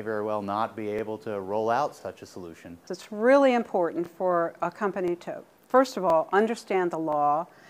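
Overlapping chunks produce a small stutter at 0.99, 2.01, 3.03, 4.06, 5.08, 6.10 and 7.13 s, each lasting about 23 ms. Every 1 s block of audio begins before the previous one has finished, so the same 23 ms slice plays twice at each join. Unlike a dropout, no sound goes missing. The brief doubled fragment returns at a steady spacing of just over one second, which rules out a random glitch.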